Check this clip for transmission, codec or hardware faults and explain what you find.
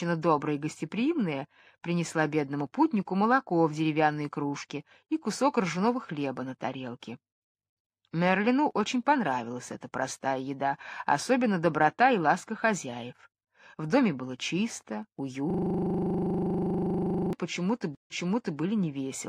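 Two faults appear near the end of the clip: a system hang loop followed shortly by a stream reconnect.

From 15.50 to 17.33 s comes a system hang loop. The computer or audio driver stalled while the sound hardware kept replaying its ring buffer. A 40 ms slice repeats 46 times at 25 Hz, producing a rough, rattling buzz. The waveform shows identical 40 ms blocks. The spectrogram shows vertical striping every 40 ms and a comb of harmonics spaced 25 Hz apart.

From 17.95 to 18.59 s comes a stream reconnect. The connection dropped, playback went silent for 149 ms, and a fresh decoder restarted mid-stream. Playback resumed 488 ms earlier, so a short stretch repeats. Both the waveform and the spectrogram show a clean blank gap, followed by a pattern that duplicates the preceding half-second.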